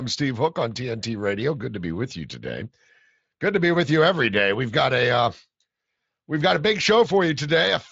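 The speech carries the light coloration of Speex coding at a fairly generous setting, consistent with roughly 24 kbps, and its bandwidth stops at about 7.7 kHz, with no technical faults present anywhere in the signal.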